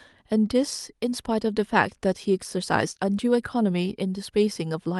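No technical fault can be heard anywhere in the recording, and the speech signal stays steady and intact throughout.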